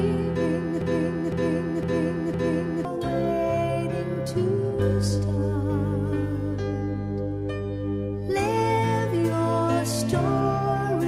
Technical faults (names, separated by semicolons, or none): broken-record loop